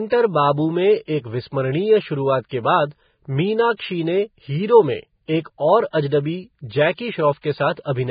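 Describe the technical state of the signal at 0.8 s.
At 0.8 s the speech sounds hissy and grainy, with nothing above 4.9 kHz, as throughout the clip: likely heavy Vorbis compression, treble coarsely quantised into noise, fitting roughly 15 kbps.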